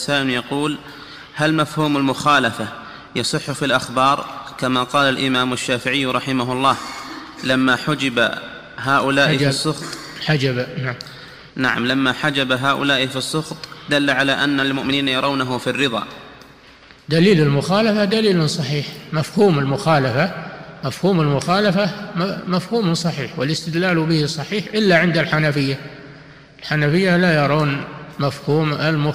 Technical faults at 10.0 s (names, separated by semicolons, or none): none